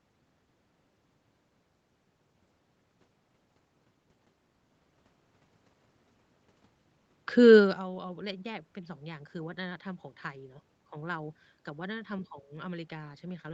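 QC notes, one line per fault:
No faults found in the speech. The call path leaves nothing above 8 kHz, room noise sits in the background, and the level shifts around 2 s and 7.5 s come from the talker moving relative to the microphone.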